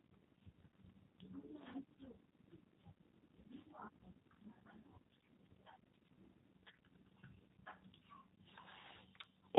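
From start to finish the speech sounds slightly rough and synthetic, band-limited with nothing above 4 kHz. This is the G.729 codec at 8 kbit/s, which rebuilds each 10 ms frame from a vocal tract filter, a pitch predictor and a few pulses, so the damage is plainly audible.

From 0.23 s to 9.24 s a click recurs at a steady 1.5 s interval. The likely cause is clock drift buffer slips: two clocks disagreeing by about 100 parts per million, so a handful of samples gets dropped or repeated each time.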